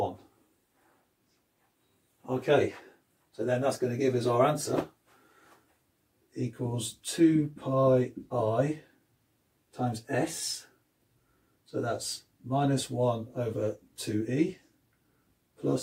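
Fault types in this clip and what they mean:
No audible faults: nothing in the signal chain was heard to misbehave.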